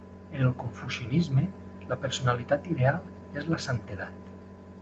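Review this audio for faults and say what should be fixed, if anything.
Nothing needs fixing: the speech shows only the ordinary character of a call path, with content stopping at 8 kHz as a wideband Opus link would leave it, and nothing in the signal calls for correction.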